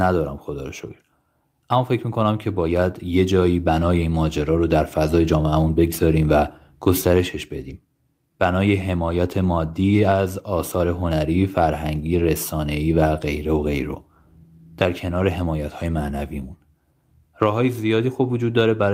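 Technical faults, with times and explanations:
4.41–4.47 s and 7.61–7.71 s, lost packet rebuilt from error correction: no gap, just brief rough, noisier patches where the decoder played the low-bitrate backup copies. That fits two and then three lost packets.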